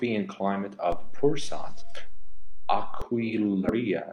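A DC step hits this speech clip at 0.92 s, just after "and climate": the waveform's zero line jumps to a new offset, which lasts until 3.02 s. Each shift lands as a low thump while the speech itself carries on untouched, the kind of jump an offset-carrying input being switched in, or a converter recalibrating, would produce. Compressed frames skipped occur at 1.77 s and again from 3.61 to 3.74 s. Frames of the encoded stream were never played, either lost from the file or rejected by the decoder as corrupt, so the audio leaps ahead by roughly 100 ms at the first point and about 150 ms at the second.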